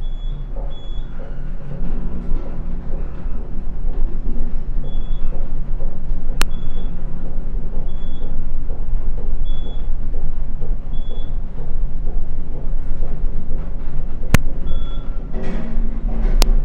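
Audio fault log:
6.42, 14.35 and 16.42 s, integer overflow: three sudden, violent cracks, each only a few milliseconds long and far harsher than clipping. At these moments loud peaks pushed only just past full scale, by about 0 dB. Instead of being held at the ceiling, the samples wrapped around to the opposite extreme of the integer range. That instant full-range jump produces the sharp snap rather than a flattened, fuzzy top.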